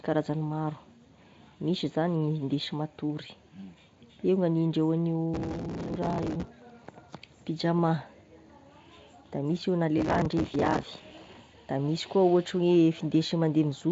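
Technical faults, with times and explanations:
5.34–6.48 s and 9.98–11.37 s (after "da misy io na", before "da misy"), processor overload crackle: gritty, tearing crackle rides over the speech, then stops. The processor keeps missing deadlines for buffers of about 5 ms, and each miss repeats a scrap of old audio with hard edges, many in a row.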